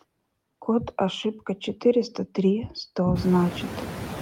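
Noise suppressor artifacts run throughout. Each frame, the suppressor cuts bands it judges to be steady noise, by about 11 dB, so the room noise dips between words and swells beneath them. The room noise itself jumps around 3 seconds.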